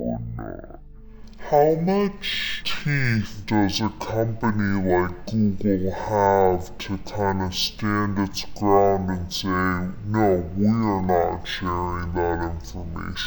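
From start to finish the sound drags at half speed and sits a full octave low, with a faint mirrored copy up in the top of the spectrum. This is stereo read as mono: the interleaved left and right samples were played back one after another as a single channel.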